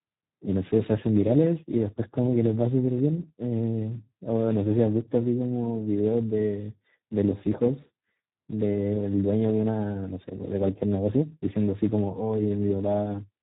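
From start to finish the speech sounds hoarse, buzzy and edged toward robotic, with nothing above 3.8 kHz. This is Speex codec damage: the coder has too few bits to model the excitation, which fits a low setting around 8 kbps.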